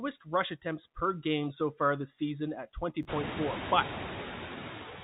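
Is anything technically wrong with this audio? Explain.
Yes. Two faults can be heard, one running through the whole clip and one brief glitch just after 3 s.

Noise suppressor artifacts are present from start to finish. The suppressor estimates which frequency bands hold steady noise and lowers them frame by frame, but here it takes only about 3 dB off. So the background stays audible, sinking slightly in the pauses and swelling back under the speech. That effect is clearest once the room noise rises by about 24 dB around 3 s. Plain coding noise from the narrowband call path behaves differently: it follows the signal level and does not pump with the gaps between phrases.

Chunks out of order occur between 3.03 and 3.05 s. A chunk of about 10 ms arrived one slot late and was played after the chunk that should have followed it, so two tiny pieces of audio swap places. No audio is missing and the timing stays intact, but the reordering creates three hard joins, heard as a short jumbled flick. 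That sets it apart from a packet-loss dropout, where there would be a gap or a smeared concealment, and from a repeat, where material would be heard twice.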